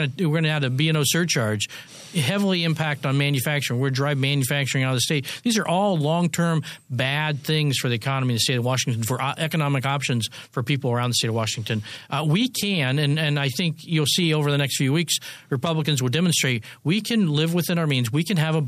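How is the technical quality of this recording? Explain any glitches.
No glitches are audible anywhere in the recording, so there is nothing to explain.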